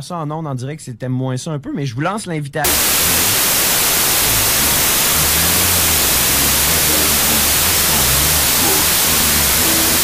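From 2.65 s on, there is a wrong sample width fault. 32-bit samples are read as 16-bit. Loud noise buries the sound, which plays at half speed and an octave low.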